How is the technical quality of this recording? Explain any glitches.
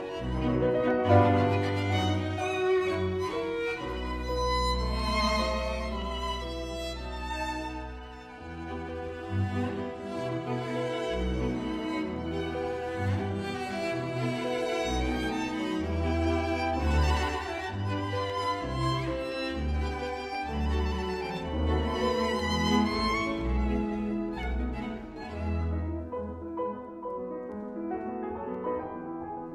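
The recording has one recurring glitch: periodic USB or driver dropouts. From 0.90 s to 28.5 s, a tick sounds every 1.02 s, about thirty in all. Something briefly blocks the audio path at that fixed rate. A tiny fraction of a millisecond is skipped each time. The splice is heard as an evenly spaced click wherever signal is present.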